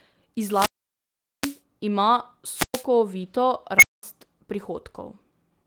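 At 0.46 s the wireless microphone signal fades and the receiver's squelch shuts the output. Hiss rises, then a 0.78 s hole of near silence follows before the speech returns at 1.61 s. A second, shorter squelch dropout runs from 2.53 to 2.86 s, muting for 0.11 s.

At 3.79 s an unstable filter runs away. Its feedback coefficients are wrong, so a tone around 2 kHz swells to a loud squeal within 38 ms and clips. The values then overflow. The output cuts to 0.21 s of silence, ending at 4.03 s.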